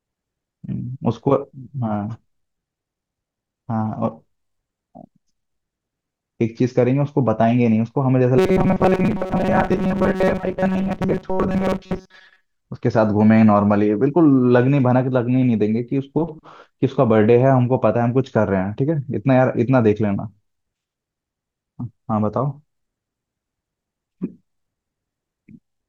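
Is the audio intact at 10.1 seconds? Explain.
No. From 8.38 to 12.44 s, missing audio was likely filled by repeating a roughly 5 ms buffer, causing robotic sound from repeated short buffers: a rigid, metallic 188 Hz buzz.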